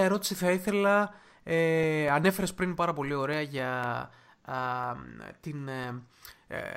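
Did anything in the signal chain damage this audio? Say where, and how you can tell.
Yes. From 1.09 s to 6.59 s the speech carries a steady train of small ticks, one every 0.25 s, about twenty in all, audible only where there is signal to interrupt. Each tick is a gap of roughly a millisecond dropped to silence. This is periodic USB or driver dropouts at the driver or buffer stage: something blocks the USB bus or audio driver on a fixed schedule, and the missing samples are replaced with silence.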